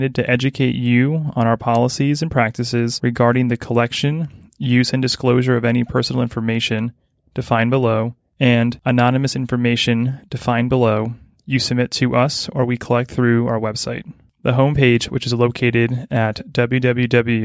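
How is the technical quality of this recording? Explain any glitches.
No glitches or technical faults can be heard anywhere here.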